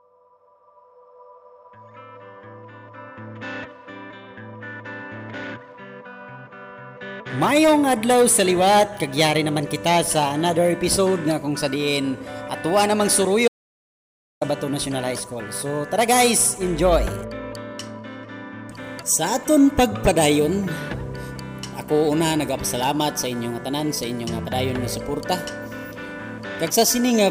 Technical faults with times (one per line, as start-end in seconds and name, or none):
13.48-14.41 audio dropout to silence